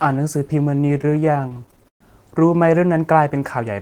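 Speech, with repeated stalls (stutter) from 0.81 to 2.02 s. Packets arrived late, emptying the jitter buffer again and again. The last sound was stretched across about twenty gaps, 310 ms in all, the longest 120 ms. Nothing is lost. The speech drags.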